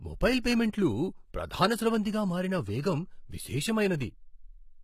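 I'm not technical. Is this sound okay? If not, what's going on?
No, it isn't quite okay. Throughout the clip, the speech has a gritty, metallic top end, and the highest treble is missing. That's most likely heavy HE-AAC compression: the codec rebuilds the high frequencies by copying lower ones upward, so they never quite match.

There's also a pre-echo from 0.39 to 0.44 s. A hiss of about 50 ms arrives just before a sharp sound starts, because the compression spread its noise across a block, smearing that sound's start.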